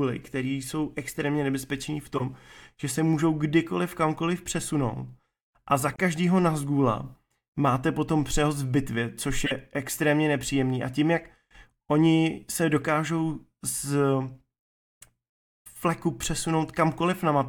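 At 2.15 to 2.22 s, a corrupt frame was decoded. Damaged bits in about three compressed frames were played anyway, placing energy at wrong frequencies. It sounds like a chirp, squeak, blip or burst of noise, peaking at about -20 dBFS. A second one follows at 5.92 to 5.99 s. It spans about four frames, adds 20.3 ms, and is quieter, at about -30 dBFS.

At 9.45 to 9.52 s, compressed frames were skipped. About 20 ms of audio never plays. The sound jumps ahead by that much.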